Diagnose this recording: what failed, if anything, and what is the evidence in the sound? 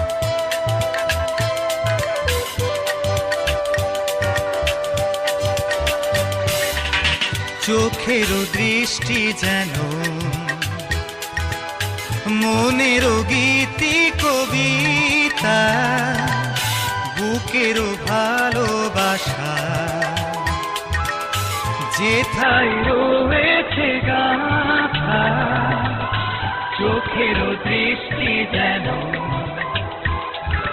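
Adaptive stream at a lower bitrate, from 22.42 s to the end at 30.72 s, a network-stage fault. The quality drops abruptly with no gap, treble vanishing above about 4.2 kHz and codec artefacts rising, which fits the player switching to a roughly 8 kbit/s version when throughput fell.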